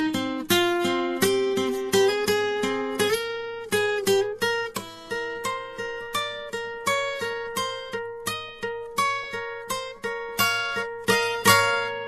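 Throughout the music, two layers of compression artefacts overlap and are heard together. This is likely transcoding between lossy codecs, pointing to a low-rate Vorbis pass followed by MP3 at about 64 kbit/s. A spectrogram shows a flat ceiling at 14.2 kHz.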